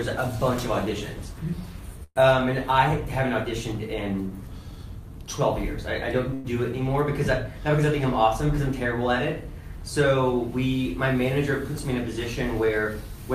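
At 2.03 to 2.18 s, and again at 6.34 to 6.46 s, there is a call audio freeze. Incoming packets were likely held up, so the receiver stretched the last sound into a fading buzz or hiss for about 123 ms the first time, ending in roughly 40 ms of silence, and about 105 ms the second time with no silence. Unlike a dropout, nothing is cut away. The audio resumes exactly where it stopped, pushed later by the inserted gap.

From 12.62 to 13.09 s comes a jitter buffer speed-up. With more audio queued than the buffer aims to hold, the receiver removed short pitch-period slices, about 50 ms in all, and played the passage at about 108% speed, so it sounds hurried. The pitch stays the same, which separates this from a faster playback rate or a resampling error, where everything would also shift upward.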